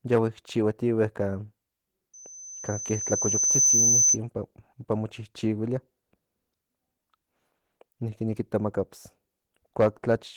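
Throughout the speech, Opus voice compression is running at a low rate, with a sound consistent with about 16 kbps in hybrid mode: SILK carries the lower band and a thin CELT layer codes the top. The excitation is quantised coarsely in 20 ms frames, so the speech comes out slightly muffled and hoarse, with a faintly robotic edge that is plainly audible across the whole clip.

From 0.14 to 0.19 s, the signal exceeds what a gain stage can pass by about 3 dB, and hard clipping flattens the waveform's peaks. The squared-off tops add harmonics high in the spectrum. With an overload this small and this brief, it is heard as a short crackle on the loudest part of that opening sound.

From 2.13 to 4.18 s, the microphone picks up the loudspeaker it feeds, and at 6.1 kHz the loop gain rises above one, producing a loudspeaker feedback squeal. That single tone reinforces itself on each trip around the loop. 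It swells over roughly a second and a half into a piercing whistle that peaks at about 5 dB above the speech.

From 9.80 to 10.13 s, hard clipping returns with about 6 dB of overdrive. Here the peaks are cut flat much more deeply and for about a third of a second, so the loud sound near the end takes on a harsh, gritty fuzz rather than a single click.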